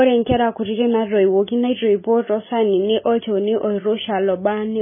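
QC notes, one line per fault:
Throughout, likely MP3 compression: nothing above 3.5 kHz and heavy damage, with a watery, swirly speech sound as weak frequency lines flicker frame to frame and consonant attacks smear, which fits a starved bitrate of around 16 kbps.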